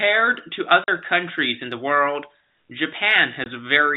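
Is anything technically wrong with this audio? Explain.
Yes. The speech drops to hard-edged silence from 0.84 to 0.88 s and from 3.44 to 3.46 s. This is packet loss filled with silence: the gaps fit two lost 20 ms packets, then one.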